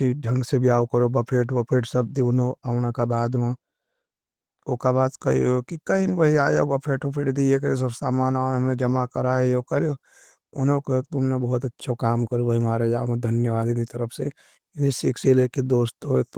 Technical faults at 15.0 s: none

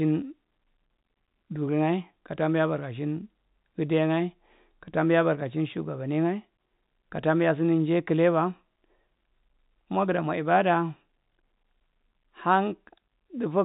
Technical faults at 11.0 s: none

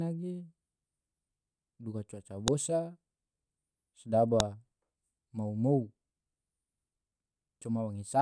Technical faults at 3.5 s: none

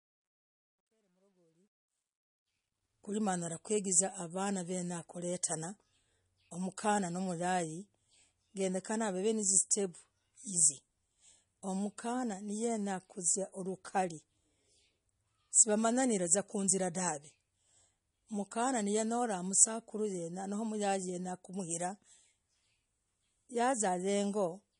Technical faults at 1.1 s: MP3 compression; truncation distortion on a fade

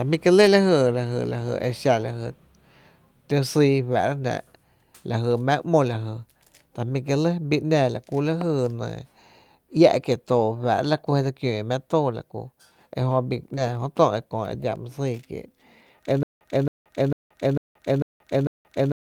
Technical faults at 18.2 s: stutter with silent gaps

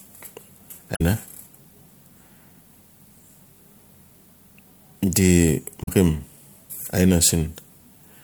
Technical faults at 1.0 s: damaged data in a compressed stream

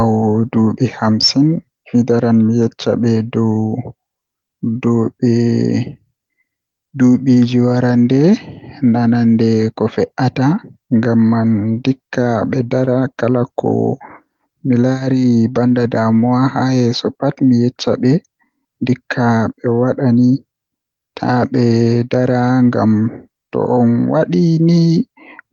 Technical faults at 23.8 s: none

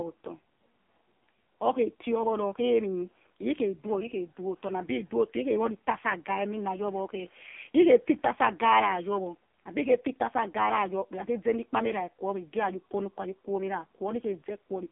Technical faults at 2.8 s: AMR narrowband mobile codec

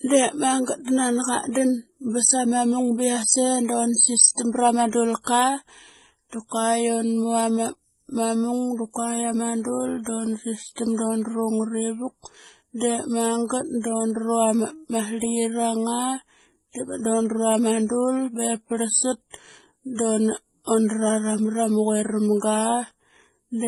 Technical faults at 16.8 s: transcoding between lossy codecs

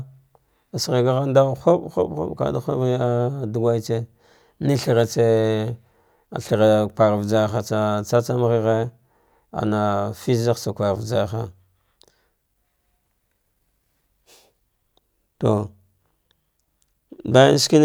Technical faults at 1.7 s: none

